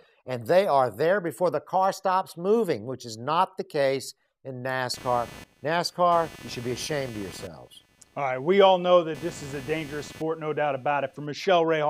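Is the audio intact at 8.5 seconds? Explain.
No. From 4.94 to 11.27 s, computer activity noise is present: shifting processor, graphics or mouse load disturbs the ground shared with the audio circuit, adding a buzzy chirping at roughly 300 Hz, about 20 dB below the sound, following the computer's activity rather than the audio.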